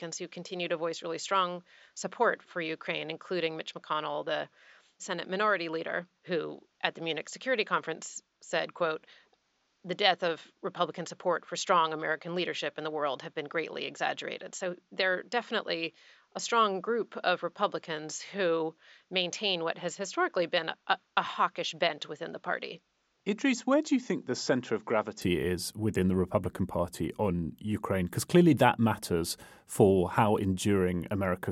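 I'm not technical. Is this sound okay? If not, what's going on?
No. For the first 25.2 seconds the recording most likely came through a different, lower-quality microphone than the one used at the end, a problem known as an input switched to a poorer device. That first stretch sounds dull and muffled, a little quieter, with a faint background hiss. At 25.22 seconds, just before "is within the", the sound suddenly becomes clearer and brighter, with no gap at the changeover.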